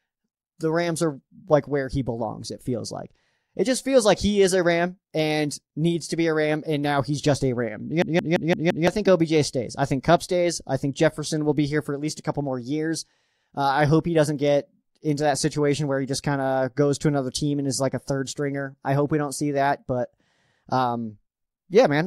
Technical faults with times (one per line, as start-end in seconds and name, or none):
8.02-8.87 system hang loop